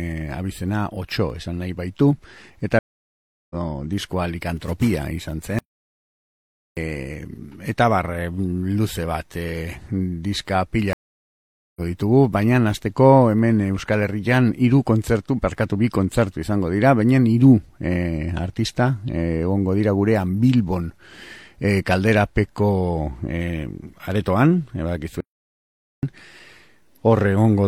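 At 2.79 s the audio drops out for about 0.71 s, until 3.56 s, in a stream reconnect. The connection broke, the player reconnected and a fresh decoder began mid-stream. When the sound returns it has jumped forward by roughly half a second, so material is missing rather than merely delayed.

From 5.59 s to 6.77 s a playback stall cuts the sound off mid-flow for about 1.18 s. The player likely ran dry of data or had its output thread blocked. The silence is a plain interruption.

A second stream reconnect comes at 10.93 s. The silence lasts about 0.83 s, and when the audio picks up again at 11.81 s it has leapt ahead by around a second.

The last fault is another playback stall, from 25.21 s to 26.03 s, a gap of about 0.82 s in which the output simply halts before carrying on.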